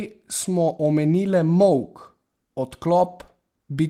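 At 3.03 to 3.05 s, a lost packet was rebuilt from error correction. One packet went missing. The next one carried a low-bitrate copy, and the decoder played that instead. No gap is heard. The 20 ms patch sounds briefly rougher and noisier.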